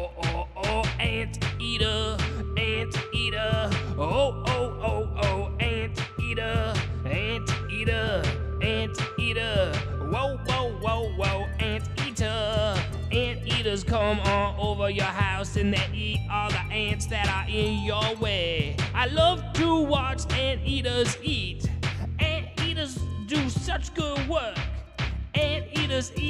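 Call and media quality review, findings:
No audible faults found on review.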